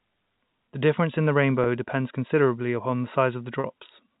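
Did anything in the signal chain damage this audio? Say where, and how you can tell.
Yes, at the network stage: packet loss with pitch repetition, twice. At 1.64 to 1.66 s and again at 3.60 to 3.64 s the speech briefly holds a buzzy, repeated pitch cycle. That's the receiver looping the last period to cover the gap, consistent with one and then two missing 20 ms packets. The G.711 telephone coding around it adds no audible damage.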